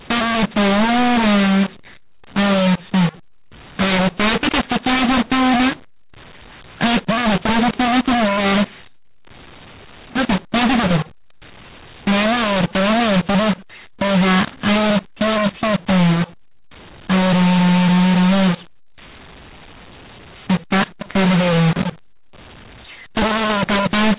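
Throughout the recording, the speech shows a mu-law and A-law mix-up: samples coded with the mu-law curve are being expanded with the A-law curve. Because the two logarithmic scales assign levels differently, amplitudes are remapped inconsistently, some pushed too loud and others too quiet, and near-silent samples are lifted well above the floor. The result is harsh, gritty distortion on the speech, and pauses fill with noise instead of quiet. The underlying telephone band, cut off at 4 kHz, fits ordinary 8 kHz G.711 coding.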